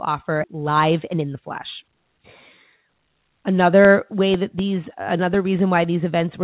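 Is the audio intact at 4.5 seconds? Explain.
No. At 4.5 s the speech falls within a run of periodic USB or driver dropouts from 3.60 to 5.84 s. Every 0.25 s a background task stalls the audio driver and roughly a millisecond is replaced by silence, giving evenly spaced ticks heard only while there is signal. That strict regularity sets it apart from random network packet loss.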